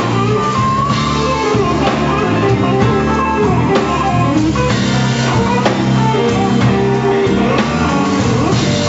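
Nothing stood out on listening; no part of the audio drew attention as a technical problem.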